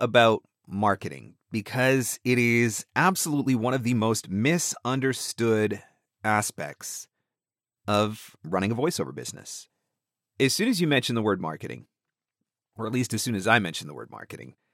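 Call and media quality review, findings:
No faults found in audio.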